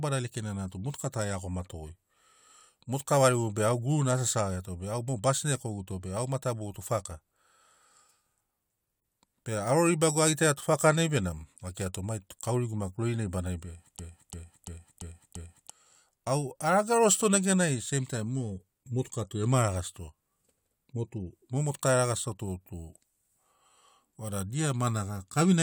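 From 13.99 to 15.70 s there is a system hang loop. The driver froze while the hardware kept replaying one 341 ms buffer, so one fragment repeats exactly five times, stuttering at about 2.9 Hz. Unlike a dropout, nothing goes silent. Instead, about 1.5 s of sound is lost.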